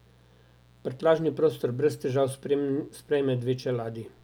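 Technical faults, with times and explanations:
Throughout, mains buzz: there's a steady, raspy buzz sitting under the speech the whole way, about 35 dB below it. It's locked to 60 Hz mains. Something like a dimmer, a rectifier or an unshielded run is letting sharp switching spikes into the signal twice per cycle, and those spikes spray harmonics of 60 Hz up into the kilohertz range, which is what gives it that gritty edge rather than a clean hum.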